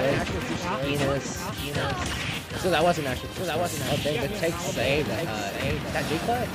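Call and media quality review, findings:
Doubled audio track, entire clip: second full-band copy trailing by about 0.7 s, roughly 5 dB down. Likely cause a parallel capture path or an edit layering two copies out of step.

Distinguishing from echo or reverb: a single repeat at a fixed offset, with no decay tail, no room colouring and no further repeats. The copy is as clean as the original.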